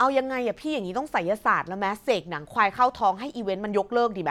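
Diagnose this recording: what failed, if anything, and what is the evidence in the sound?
Nothing failed; no stage shows any fault here.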